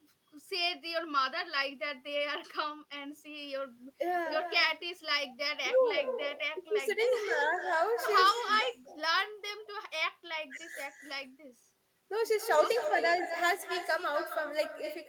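All the way through there's echo with no canceller: the far end's speaker feeds its mic, so each phrase returns about a third of a second later, roughly 9 dB down and thinner.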